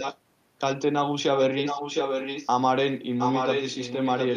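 A far end likely playing the call on a loudspeaker let its echo canceller miss part of the talker, producing an echo leak in this speech: a copy trailing 710 ms behind, only slightly quieter, at 0.0–0.18 s, 1.35–2.49 s and 3.18 s to the end.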